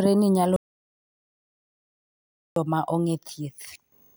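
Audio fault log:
0.56–2.56 s, audio dropout to silence: the speech cuts off mid-flow into two full seconds of dead silence, no room tone at all, likely a lost input or link.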